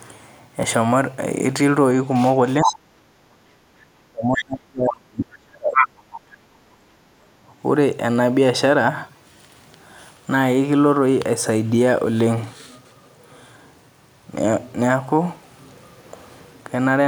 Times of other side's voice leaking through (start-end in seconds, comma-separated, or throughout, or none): 2.63-2.75, 4.38-4.44, 5.75-5.87